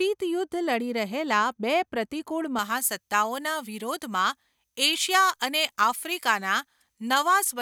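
From 2.59 s, right after "રહેલા બે પ્રતિકૂળ", pre-emphasis is left on through to the end of the speech. The treble was boosted for recording or transmission, and the matching de-emphasis cut was never applied. At 10 kHz the top end sits about 11 dB above its level at 1 kHz. The tilt fits a J.17 curve. The speech turns thin and glassy. Sibilants hiss and spit. Body drains from the lower range.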